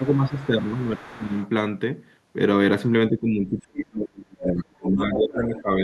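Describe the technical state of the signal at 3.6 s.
At 3.6 s the signal is caught in speech suppressed in double talk, which runs from 3.1 to 5.7 s. Both ends appear to be talking at once, and the echo canceller has likely failed to tell the near talker apart from the loudspeaker echo, so it attenuates everything. The talker's speech dips and breaks up in pieces across roughly two seconds of that span, at worst falling by around 35 dB, enough to nearly vanish.

Just after, from 3.63 to 3.84 s, the other side's voice is leaking through. The loudspeaker playback has likely not been fully cancelled from the microphone, so a short scrap of the far talker rides along with the near signal. It sits roughly 10 dB below the speech, a second voice layered into a stretch that is already being pulled down.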